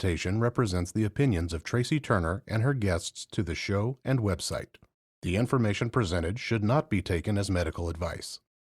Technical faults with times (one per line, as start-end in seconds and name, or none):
none